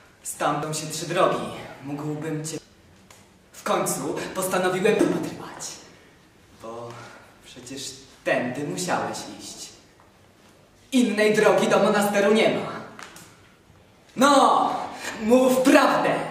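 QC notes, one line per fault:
0.63 s, 2.58 s, 4.99 s: damaged data in a compressed stream. Each point has a brief chirp or blip that breaks into the sound. Part of the coded data there is wrong, through lost, zeroed or overwritten bytes. The decoder misreads or rejects those frames and loses its place in the stream. It then hunts for the next valid frame header and resumes. The garbled frame and the restart produce the short squawk.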